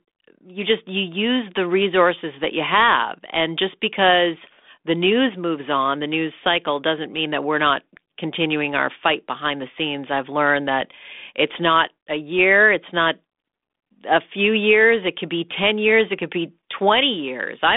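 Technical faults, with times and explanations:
Nothing here stands out as a fault, just speech carried over 32 kbit/s G.726 ADPCM with the usual telephone band that tops out around 3.8 kHz.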